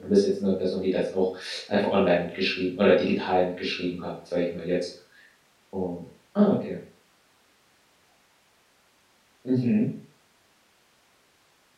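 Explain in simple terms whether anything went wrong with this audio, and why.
Nothing went wrong here.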